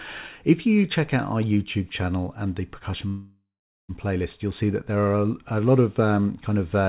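At 3.08 s the audio stops advancing and a call audio freeze begins, lasting until about 3.91 s. The last sound is stretched into a buzzy tone that fades, and then there is roughly 0.44 s of silence before the audio resumes exactly where it left off. Nothing is lost, but everything after 3.91 s arrives about 0.81 s late. The likely cause is packets held up in transit, leaving the jitter buffer empty.

On a spectrogram the fill shows as smeared, repeating bands confined below 4 kHz, the ceiling of the G.711 call path. The bands fade into a blank column before normal texture returns. The waveform shows a decaying repetitive envelope flattening to silence.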